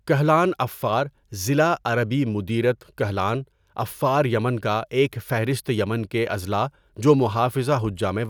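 Nothing technical stands out in this bit of speech, so there are no faults, times or causes to point to.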